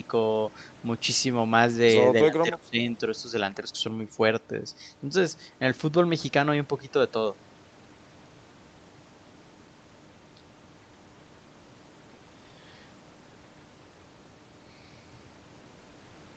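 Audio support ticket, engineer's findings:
Speech suppressed in double talk, 2.3–2.79 s: level drops in pieces, up to about 25 dB, roughly 0.3 s affected in total. Likely echo canceller muting near-end while far-end also talks. Waveform shows chopped, notched envelope; spectrogram shows faded vertical strips.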